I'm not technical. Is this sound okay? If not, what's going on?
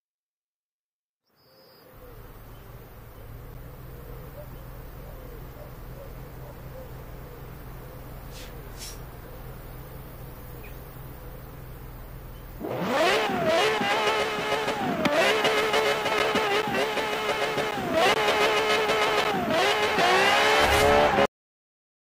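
No. The clip has a cut-off end. At about 21.26 s the sound stops abruptly, partway through, instead of finishing or fading away. It drops straight to complete digital silence, with no natural decay, and stays silent for the last 0.8 s. This happens when the final chunks of audio were never saved or played, so the recording ends where the data ran out rather than where the sound ended.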